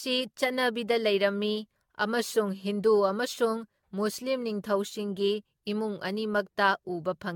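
A speech clip with generation loss throughout: the sound is swirly, hollow and smeared, with blurred consonant attacks, likely from around ten repeated lossy encodes, consistent with AAC-LC near 96 kbit/s. A spectrogram shows nothing above 17 kHz.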